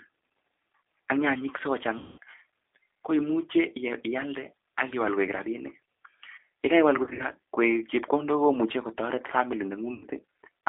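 Throughout the speech, G.729 codec damage is plainly audible: a thin, slightly rough and synthetic sound held to about 300 Hz to 3.6 kHz, consistent with an 8 kbit/s G.729A stream. A spectrogram shows a hard ceiling near 3.6 kHz and smeared, grainy harmonics.

VoIP packet loss, concealed by the speech codec, strikes at 1.98 to 2.18 s (about 200 ms missing), 4.90 to 4.95 s (a single 20 ms gap), 7.03 to 7.23 s (scattered drops totalling about 120 ms, longest 60 ms) and 9.94 to 10.06 s (about 80 ms). Each time, the decoder stretches the last pitch and filter into a buzzy tone or coloured noise that fades, and the speech stays weak just afterwards. On a spectrogram, this looks like flat, repeated harmonic bands, and on a waveform like a decaying envelope.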